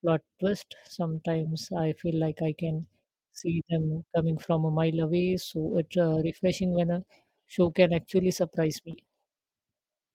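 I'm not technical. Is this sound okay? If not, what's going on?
No. In three places the speech briefly degrades, and at the last of them it also briefly smears, because bits of the call's audio failed to arrive.

Lost packet rebuilt from error correction, at 1.15–1.17 s, 7.65–7.71 s and 8.93–8.95 s: pieces of audio went missing, but the following piece carried a rough backup copy, which was played instead. There is no gap, but the speech sounds rougher and noisier there. The 7.65 s spot has 40 ms rebuilt, which points to two lost pieces.

Short concealed packet loss, at 8.91–8.95 s: 20 ms of audio never arrived in time. For 14 ms of that, the receiver kept the previous sound going, then blended back into the real audio. This produces a brief smear or wobble that runs straight into the rebuilt section described above.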